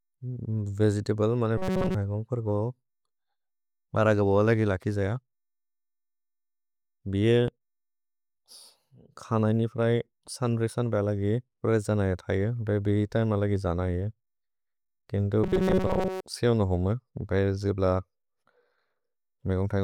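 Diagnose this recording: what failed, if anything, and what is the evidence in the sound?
Robotic sound from repeated short buffers appears at 1.58–1.95 s and 15.44–16.23 s, where the speech turns into a rigid metallic buzz at 188 Hz. The likely cause is a starved driver or buffer stage replaying a roughly 5 ms chunk for most of each stretch.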